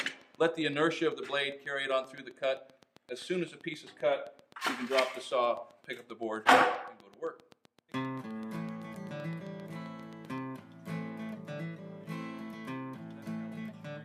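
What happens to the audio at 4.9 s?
A steady ticking runs through the audio at 4.9 s, part of a train of clicks lasting from 0.09 s to 10.39 s. The clicks are evenly spaced at about 7.7 per second, roughly seventy in all, each peaking around the level of the sound itself, so they stay plainly audible over it and in the gaps. Their near-identical shape and regular pace point to likely interference from nearby equipment or a faulty connection or power supply repeatedly injecting a pulse into the signal.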